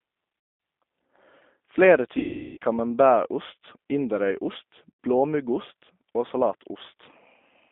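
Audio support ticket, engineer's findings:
G.729 codec throughout: narrowband, rough, slightly synthetic speech. Band runs 200 Hz to 3.6 kHz, with a hard ceiling on the spectrogram and a low-end cut, which fits an 8 kbit/s G.729A path. Speech is rebuilt from a vocal-tract filter, pitch predictor and sparse pulses, so harmonics look smeared and grainy. Codec damage is plainly audible.

VoIP packet loss concealed by the speech codec at 0.40–0.60 s (200 ms), 2.19–2.58 s (380 ms) and 4.92–4.99 s (70 ms). The decoder stretches the last pitch and filter into a buzzy tone or coloured noise that fades. On the spectrogram this shows as flat repeated harmonic bands or smeared noise. In the waveform, the envelope decays frame by frame. Recovery is slow after each gap, with speech weak for tens of milliseconds. The longest dropout is at 2.19 s.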